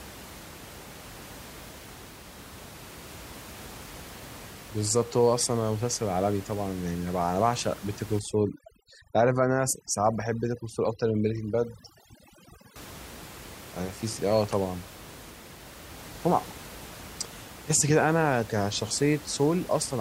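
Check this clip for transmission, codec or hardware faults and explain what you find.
One fault stands out. From 8.19 to 12.76 s there is overdone noise removal: a noise reduction stage set far too aggressively cuts individual frequency bands whenever they sit close to its noise estimate, also taking the quieter parts of the speech. The room noise, about 18 dB below the speech, drops and breaks up into twinkling, warbling specks.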